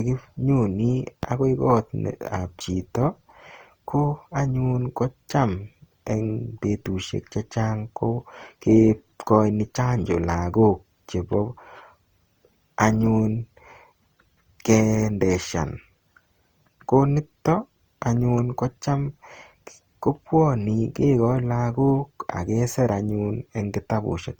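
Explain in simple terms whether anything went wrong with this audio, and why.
Generation loss: the speech was likely compressed and re-compressed several times, so throughout it sounds swirly, hollow and smeared, with blurred starts.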